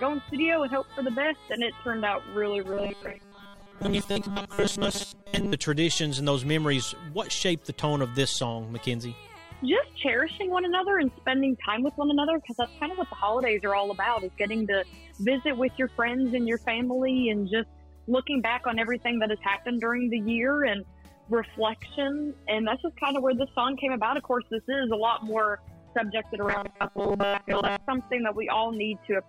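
At 2.73 to 5.53 s and 26.46 to 27.87 s, robotic sound from repeated short buffers imposes a 200 Hz buzz. A 5 ms chunk likely repeats over missing audio.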